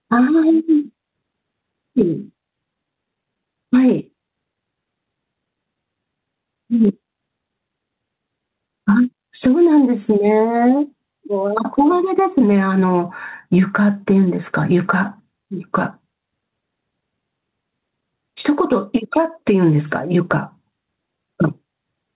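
Gain pumping runs throughout: the gain swings about 10 dB under loud passages, likely from excessive gain feeding a fast limiter.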